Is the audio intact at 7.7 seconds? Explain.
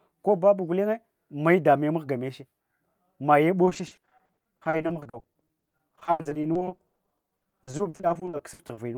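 No, 7.7 s falls inside a stretch of repeated packet loss (robotic sound) running from about 3.65 to 8.79 s. Packets keep going missing, and each hole gets patched by stretching the last bit of sound, with dozens of these gaps in a row, the longest around 80 ms. Roughly two fifths of that stretch is patched-over filler, so the speech there comes out choppy, with pieces dropped out.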